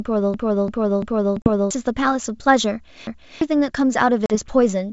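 From 0.34 to 1.71 s the speech stutters. This is a repeated buffer. New audio arrived too late, so the device replayed its last block. One 341 ms piece sounds five times in a row, which fits an 8192-sample buffer. Each repeat meets the next at a hard join. About one and a half seconds of real speech is skipped.

Inside that stutter, from 1.42 to 1.48 s, comes packet loss on an ADPCM call. About 40 ms, likely a couple of packets, drops out as a hard-edged hole. The decoder's predictor and step size no longer match the sender's. So the sound resumes slightly distorted, and settles within tens of milliseconds.

From 3.07 to 3.41 s the repeated buffer returns. The same 341 ms piece plays twice with a hard join. Roughly 300 ms of speech goes missing.

From 4.26 to 4.36 s there is a second ADPCM packet loss. Another 40 ms drops to silence. The sound comes back slightly distorted.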